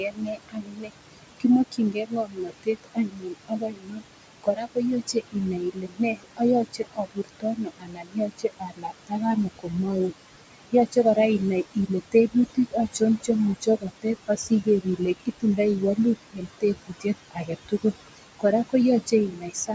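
It's a speech recording, and the noise reduction has been cranked way too hard. That's overdone noise removal running through the whole clip: the room noise, which sat only about 12 dB under the talker, has been treated as something to erase, so the gaps fall to near silence with little twinkly specks, and the quieter bits of the voice got caught in the same sweep. Layered on that are noise suppressor artifacts, also constant. The suppressor pulls the noise down by about 21 dB between phrases, then lets it swell back under the speech as the per-band gains jump from frame to frame. There is also speech cut by the noise suppressor, where it mistook parts of the voice for noise. From 0.0 to 10.12 s it's heavy, with roughly 7 seconds' worth of speech dropped by up to about 22 dB. There's a brief touch between 10.72 and 11.41 s, only a tenth of a second or so and about 13 dB down. From 11.74 to 18.74 s another couple of seconds get swallowed, again up to about 22 dB, and from 19.06 s to the end a bit under half a second fades by up to about 19 dB. 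The top end stopping at 8 kHz is just the call mic chain's band limit, not part of the problem.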